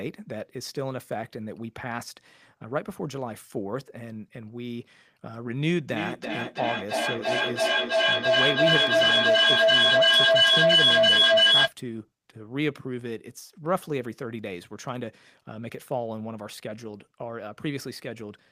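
From 5.9 to 11.76 s, feedback echo between two devices. Speech returns roughly every third of a second, building to about 11 dB above the original.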